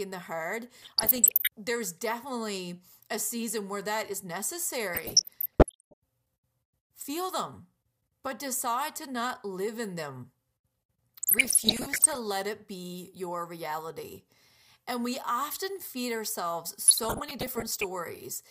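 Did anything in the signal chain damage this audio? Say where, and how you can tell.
Yes: DAB burbling at the codec stage, at 0.82–1.47 s, 4.94–5.94 s, 11.2–12.17 s and 16.88–17.84 s. Bit errors around one percent (fewer in the last burst) corrupt MP2 scale factors, so single sub-bands jump for a frame. Spectrograms show flickering band blocks, and waveforms show squelchy level spikes.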